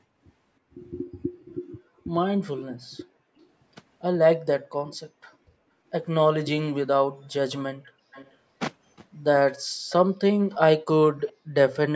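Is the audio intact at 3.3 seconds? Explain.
No. From 3.32 to 3.38 s the speech briefly cuts out, dropping by about 40 dB, likely speech suppressed in double talk as the echo canceller attenuated overlapping talk.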